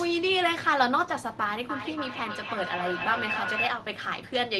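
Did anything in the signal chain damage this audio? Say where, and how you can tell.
Yes, there's feedback echo between two devices from 1.69 to 3.83 s. The speech keeps coming back about every third of a second, getting thinner and more ringing, peaking about 5 dB below the speech. That's a room-level acoustic loop: a second device replays the audio, and each echo canceller only strips its own playback.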